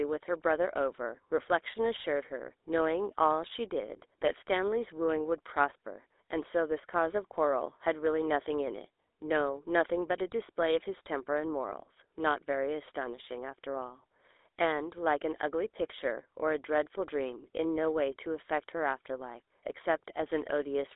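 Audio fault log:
Throughout: GSM full-rate codec. The speech carries a buzzy, gravelly roughness from a vocal-tract model excited by coarse regular pulses, at a rate that fits 13 kbps, and nothing above 3.8 kHz survives. The grit in the excitation, not just narrow band, marks this apart from plain telephone filtering.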